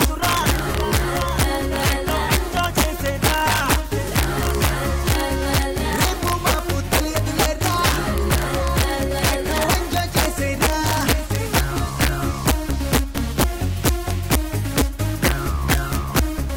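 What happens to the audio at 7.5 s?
At 7.5 s the audio is affected by integer overflow, which runs through the whole clip rather than starting or stopping there. The signal is driven about 1 dB past the integer limit, so whenever a peak exceeds full scale the value wraps to the opposite extreme instead of being held at the limit. Only a small share of samples, on the order of one or two percent, crosses over, but each one produces a sharp, violent crack on the loudest moments, far harsher than ordinary clipping.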